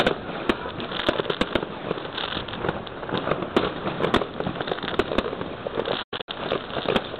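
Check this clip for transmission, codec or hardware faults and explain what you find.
One fault, near the end. From 6.02 to 6.29 s the sound falls into soft-edged gaps, the longest about a tenth of a second. This is AAC frame loss with muting: lost frames were zeroed, and the overlapping windows faded the audio out and back in.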